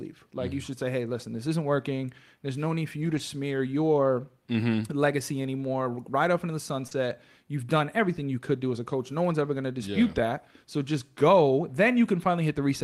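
Between 3.01 and 3.19 s, right after "no need for" and just before "smear your", the sound turns briefly rough and noisy with no actual gap. This is a lost packet rebuilt from error correction: the decoder played low-bitrate copies carried in later packets, rebuilding about 100 ms, which fits five lost 20 ms packets.

At 6.87 to 6.93 s, after "off into the", there is a brief smear and wobble. This is short concealed packet loss: about 40 ms never arrived in time. Roughly 33 ms of it was filled by extending the preceding sound. The last 20 ms, from 6.91 s, was instead rebuilt from an error-correction copy, so the end of the gap also sounds coarse.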